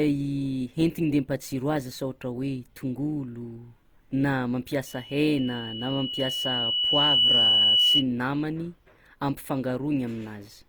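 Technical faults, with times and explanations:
Throughout: Opus compression is the likely cause of the plainly audible grainy, rough texture on the speech. In its music-oriented CELT mode the encoder preserves each band's overall energy, but with too few bits it fills band detail with folded copies of lower bands or with noise, so the speech turns coarse and gritty rather than swirly. The band remains fullband, ending near 20.2 kHz, and the degree of damage fits a rate around 24 kbps.
4.86 to 8.05 s: a loudspeaker feedback squeal rises as a single steady tone at 3 kHz, swelling over roughly two seconds until it sits about 10 dB above the speech, then stops at 8.05 s. A microphone was picking up the loudspeaker it fed, and at 3 kHz the loop gain exceeded one, so that frequency kept reinforcing itself with each pass around the loop until it dominated.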